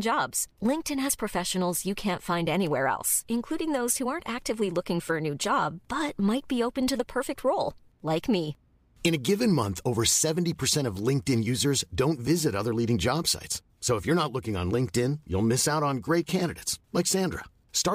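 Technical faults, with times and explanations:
No technical faults can be heard anywhere in this speech recording. Nothing in the audio calls for a time or an explanation.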